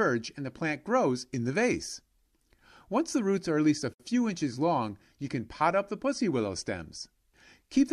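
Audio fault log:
3.94–4.00 s, gap at a join of encoded pieces: 61 ms gap after "are at least a". Untrimmed encoder delay and padding remain.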